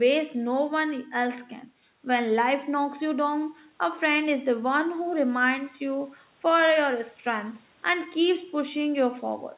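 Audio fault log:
No faults are heard in this speech. The audio comes through a call path with nothing above 4 kHz, which fits a narrowband telephone codec.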